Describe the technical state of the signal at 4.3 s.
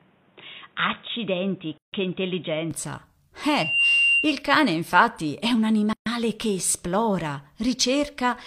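Loudspeaker feedback squeal, 3.43 to 4.46 s, covers 4.3 s. The microphone hears its loudspeaker, and at 2.8 kHz the loop gain exceeds one. That tone swells within about 0.4 s to sit a few dB above speech, stopping before "infatti è un".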